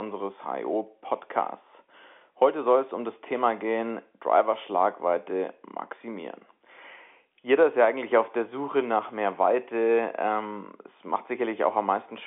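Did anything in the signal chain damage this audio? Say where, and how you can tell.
No, the speech carries only the expected narrowing of G.711 telephone coding, with the line band running from roughly 250 Hz to 3.5 kHz and nothing audible above about 3.8 kHz.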